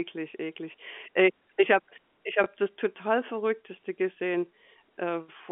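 At 2.44 s, between "ich habe ich" and "das total", packet loss with the last packet repeated leaves a small blip. About 20 ms of sound, which fits one lost 20 ms packet, is replaced by the previous segment. On the waveform, that stretch duplicates the preceding cycle pattern. The spectrogram shows it within the 200 Hz to 3.4 kHz telephone band.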